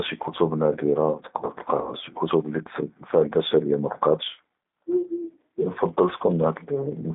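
A speech clip carried over the G.729 codec throughout. The sound is confined to roughly 200 Hz to 3.7 kHz. At 8 kbit/s the codec rebuilds each frame from a filter, a pitch predictor and a few pulses, so the voice sounds plainly rough and synthetic. From 1.81 s to 1.91 s there is VoIP packet loss concealed by the speech codec. About 60 ms of audio went missing, which fits two lost packets. The decoder stretched its last pitch and filter into a fading, buzzy tone or coloured noise. The voice stays weak or distorted as it recovers into "שִׁי כְּתוּב לִי".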